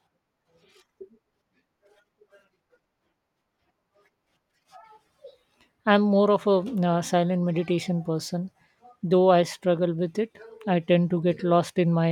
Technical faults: none

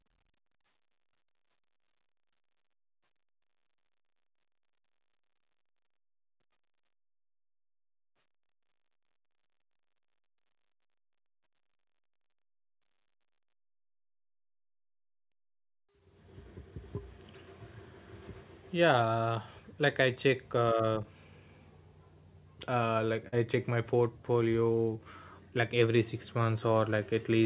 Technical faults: short concealed packet loss

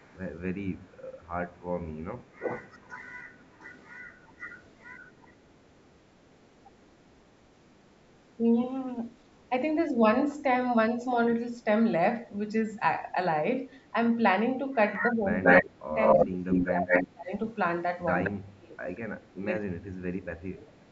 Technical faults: echo leak; speech suppressed in double talk

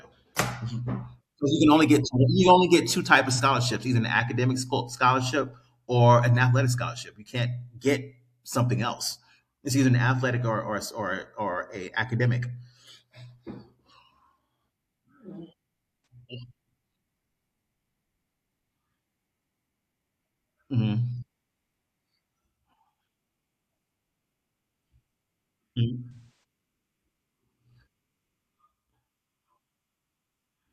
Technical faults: AAC frame loss with concealment

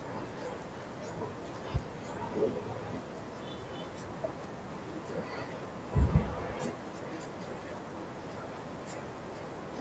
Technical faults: none

